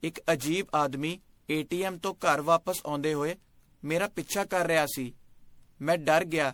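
Speech that sounds swirly, smeared and hollow throughout, with blurred attacks, most likely generation loss from roughly ten MP3 passes at a 96 kbit/s setting. Unlike one low-bitrate encode, the damage exceeds what the bitrate explains, though content still reaches about 20.6 kHz.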